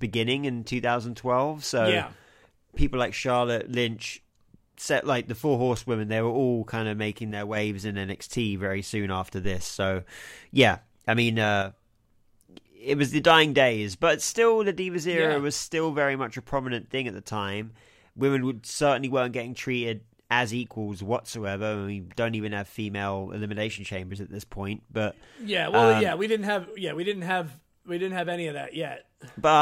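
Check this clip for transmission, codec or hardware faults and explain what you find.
A phantom power thump at 9.44 s: a supply switching on or off on a live input pushes a step through the coupling capacitors, giving a deep thump peaking near -21 dBFS and decaying within about 62 ms.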